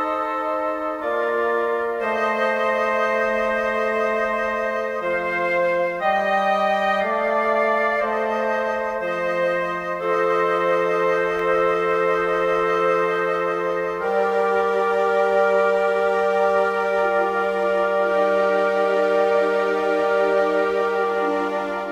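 At 11.39 s a single sharp snap, an electrical switching spike, sits on top of the unbroken sound at a moderate level, likely a nearby switch arcing into the line.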